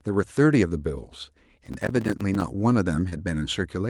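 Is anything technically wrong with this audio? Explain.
Yes, there are two faults in this speech clip.

From 1.66 to 2.42 s there is processor overload crackle. The processor missed its deadlines again and again, about twenty times. Each miss left a tiny hard-edged silent gap, which fits buffers of around 5 ms. Together the gaps sound like gritty crackle that stops at 2.42 s.

From 3.09 to 3.14 s there is short concealed packet loss. About 20 ms of audio never arrived in time. The receiver covered it by extending the preceding sound for 23 ms, then blended back into the real audio. It is heard as a brief smear.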